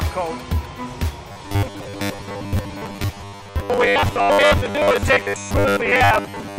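From 1.32 s to the end of the audio, the sound takes on a rigid, metallic buzz pitched at 100 Hz: robotic sound from repeated short buffers. The 100 Hz figure fits a 10 ms stretch being replayed over and over, with most of that span filled by repeats rather than fresh material. This is likely audio arriving too seldom for playback, so the software loops its last short buffer while the real signal in between is dropped.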